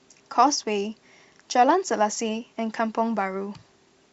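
No technical faults can be heard in the audio.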